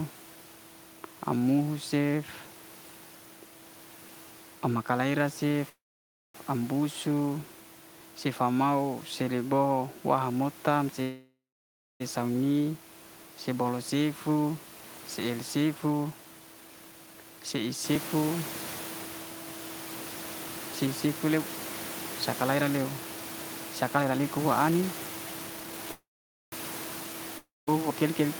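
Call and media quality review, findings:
Call audio freeze at 5.69–6.36 s after "maka'rai la cef", 11.02–12.02 s after "mo'tam si", and 25.92–26.54 s. Last sound held as a fading buzz, then near-silence for about 0.56, 0.62, and 0.49 s. Speech resumes intact, later. Likely cause: jitter buffer underrun from held-up packets.

Audio missing between chunks at 8.01 s, just before "sifa mau", then at 17.96 s and 27.91 s. Abrupt skip, about 50 ms gone, sides butted together. Regular spacing of about 10 s. Likely a chunked recorder or processor dropping audio at each chunk boundary.

Jitter buffer speed-up at 15.66–19.31 s, running 7% fast with about 0.3 s removed. Again at 20.86–25.89 s, 17% fast with about 1 s removed. Pitch unchanged, delivery hurried. Receiver trimming pitch periods to drain excess buffered delay.

Long network dropout at 27.38–27.69 s. Short fading fill of about 0.29 s, then about 0.19 s of quiet. 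Room noise audible there, up about 10 dB since roughly 18 s. Speech returns with about 0.3 s lost. Likely cause: packet loss over the stretch.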